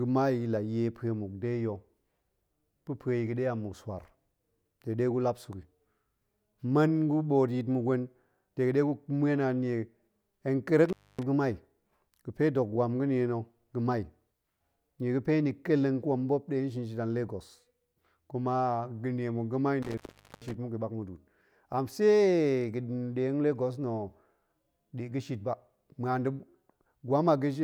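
Speech with an intermittent contact fault, where a loose plug or cable briefly loses connection. The sound drops out between 10.89 and 11.23 s, with the line open for about 0.26 s, and again from 19.83 to 20.55 s, after "kuma ga̱nie muk ga̱mai" and before "muk a ɓak", open for about 0.44 s. Each gap has crackle at its edges and faint hiss inside. On a waveform the gaps appear as flat near-silent stretches bordered by sharp spikes. On a spectrogram they show as dark bands with vertical broadband streaks at each edge.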